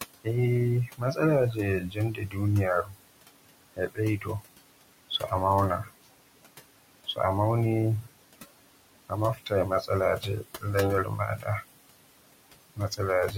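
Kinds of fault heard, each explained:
Noise suppressor artifacts: The suppressor runs across the whole clip, treating steady background as noise and turning it down frame by frame, here by about 20 dB. The room noise, sitting about 15 dB under the speech, drops away in the gaps and then comes back up underneath the talking, so the background seems to pump in and out with the speech.
Speech cut by the noise suppressor: In places the suppressor mistakes quieter parts of the speech for noise and pulls them down with the background, so they come across faint or swallowed. This happens at 0.87 to 2.99 s (dips down about 21 dB, under a second in total), 3.76 to 4.43 s (about 20 dB), 5.84 to 6.07 s (about 20 dB), 9.09 to 11.64 s (about 17 dB) and 12.76 to 13.33 s (about 13 dB).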